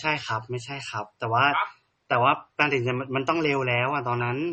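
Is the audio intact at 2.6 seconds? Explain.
No. At 2.6 seconds, as across the whole speech clip, nothing sits above 8.4 kHz, and smeared, swirly artefacts of two different kinds overlap. This points to transcoding between lossy codecs, likely a low-bitrate MP3 re-encoded to AAC. A spectrogram shows a hard ceiling with patchy, holey high bands.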